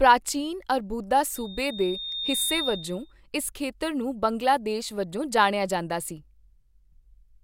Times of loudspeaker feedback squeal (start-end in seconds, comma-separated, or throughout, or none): 1.35-3.13